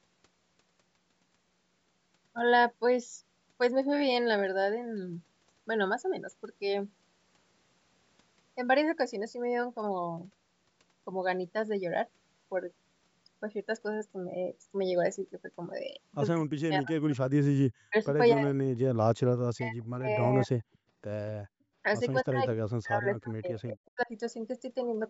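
From 16.43 to 17.41 s, 17.87 to 17.95 s, 18.34 to 18.88 s, 19.55 to 20.65 s and 22.23 to 24.1 s, the speech dips sharply, by up to roughly 40 dB. This is speech suppressed in double talk, likely because the echo canceller turned the talker down while the far side was also speaking.

Brief echo leaks at 20.73 to 20.78 s and 23.68 to 23.73 s bring back a very faint copy of the voice 243 ms late. The likely cause is residual loudspeaker pickup that the echo canceller failed to remove.

At 21.48 to 21.74 s, the background is gated by the echo canceller. The room sound drops by about 28 dB for roughly a third of a second, then returns when the canceller releases.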